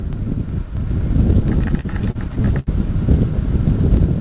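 The audio comes through a call path, with nothing above about 4 kHz, which fits a narrowband codec like G.711. From 1.52 to 2.69 s there's repeated stalls, a stutter: packets arrived late, the jitter buffer kept running dry, and the receiver stretched the last sound across 13 gaps, up to 74 ms each. That's about 249 ms filled, roughly a fifth of that stretch, with nothing actually lost, so it just drags.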